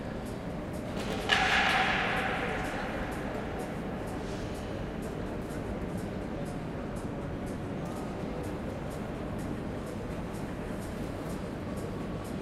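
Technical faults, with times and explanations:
6.36–7.77 s, drift correction step: the sound slows by about 5.5% and drops nearly a semitone, then snaps back, likely a clock-matching rate step.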